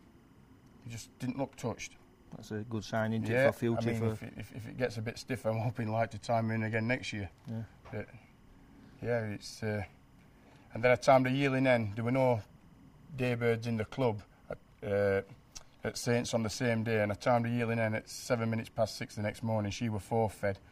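A faint, steady chirping warble runs behind the sound from start to finish, sitting roughly 40 dB below the programme and flickering between two pitches around 1 and 2 kHz. This is timecode bleed: linear timecode running at 25 frames per second has leaked in from a neighbouring track or cable. Its square-wave code keeps switching between the two frequencies to carry each bit, which is why the leak sounds like a continuous, rapid warble.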